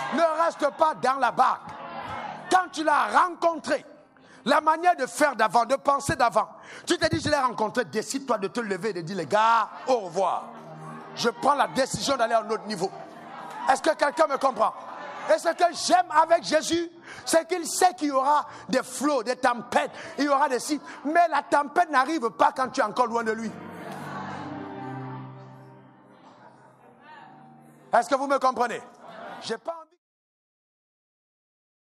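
Nothing here sounds wrong, and the only thing worth noting is the gentle fade-out that begins at around 29 seconds and is gone by 30.01 s, just as an editor would shape it.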